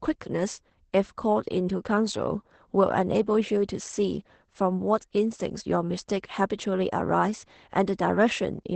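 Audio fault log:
Throughout, Opus voice compression: speech sounds muffled and hoarse, nothing above 8.5 kHz, coarse excitation coding suggesting about 12 kbps SILK, not simple lowpass dullness.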